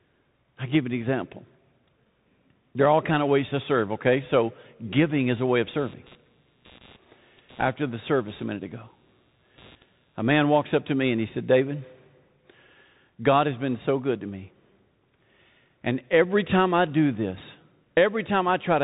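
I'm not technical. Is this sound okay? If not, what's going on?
No. The whole clip went through a Bluetooth CVSD headset codec, a narrowband phone-style link that removes everything above 3.8 kHz, so it sounds muffled, with scratchy s sounds and grainy hiss. From 5.29 to 10.54 s, just before "up to me and", there's computer activity noise: a low buzz pulsing roughly 150 times a second, leaking in from the computer's electronics.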